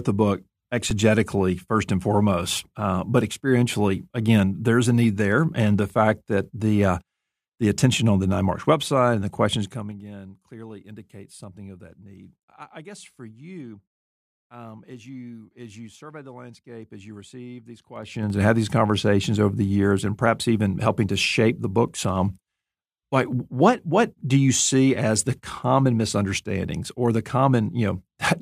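At 0.90 s the speech stops for about 5 ms, flat and nearly silent, then resumes. This is an underrun with a held sample: the output buffer ran dry, the converter held its last value for 256 samples, and live audio was lost.

From 9.43 to 10.03 s a fast ticking rides on the speech as it drops by roughly 20 dB. This is zipper noise: the gain fell in unsmoothed steps of about 3 dB, around ten per second, each step clicking. The same ticking returns from 17.93 to 18.39 s as the level climbs back roughly 20 dB, now at about fifteen steps per second.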